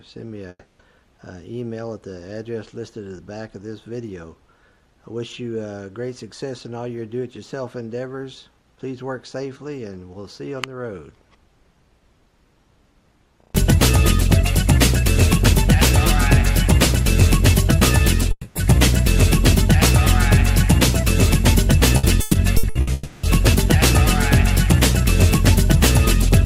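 At 0.49 to 0.82 s and again at 18.31 to 18.58 s, the sound continues as a fading buzz for about 0.3 s and 0.24 s, then briefly goes silent before resuming with material skipped. This is a long network dropout, likely from audio stopping arriving, with the receiver stretching the last sound to cover the hole. Unlike a simple mute, the tail decays rather than cutting off. At 16.27 s a single sharp tick is a bit error spike: a flipped bit across three samples jumps the waveform and snaps back, too brief and broadband to be a dropout. From 21.97 to 22.90 s, repeated packet loss produces choppy sound with pieces missing. Five short gaps, the longest 120 ms, are each patched, covering about 39% of the stretch, so the texture stutters rather than fading out. It runs straight into a third long network dropout at 22.93 to 23.26 s, where about 0.3 s is filled and lost with no silence before the sound returns.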